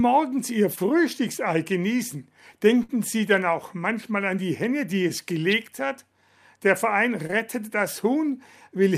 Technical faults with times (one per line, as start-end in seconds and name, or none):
0.75-0.79 short concealed packet loss
2.83-2.91 burst of packet loss
7.27-7.31 short concealed packet loss